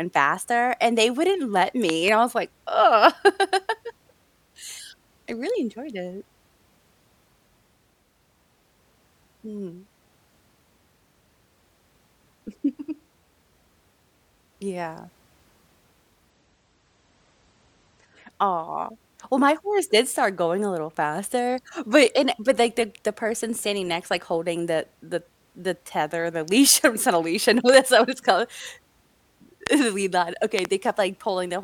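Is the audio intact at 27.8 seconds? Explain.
No. A loud pop, two sharp clicks from 27.69 to 27.76 s, sits about 15 dB above the speech just before "what it's called", with the speech continuing underneath. It is likely a brief voltage pulse, such as static or a switching glitch, added to the signal.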